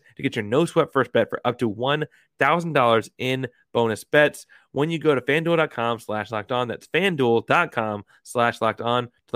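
No technical faults can be heard anywhere in the speech recording.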